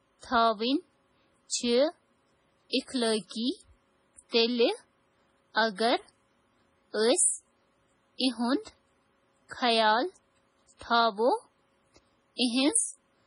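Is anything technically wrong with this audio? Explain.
Yes. Throughout the speech the encoder has likely been starved of bits, consistent with heavy MP3 compression at a rate around 24 kbps. Short of data, it removes everything above 10.6 kHz and discards weaker frequency lines, which flicker on and off from frame to frame. The result is dull, with no air on top, and a watery, swirling texture, metallic chirping on s sounds, and consonants whose onsets blur.

Pre-echo occurs at 1.49 to 1.51 s, 2.70 to 2.73 s, 4.29 to 4.33 s and 8.18 to 8.20 s. In each case a sharp onset lands late in a transform block, so quantisation noise scaled for the loud attack spreads back into the quiet just before it. Each attack is preceded by a short hiss lasting 25, 33, 34 and 22 ms respectively, and the attack itself sounds softened and smeared.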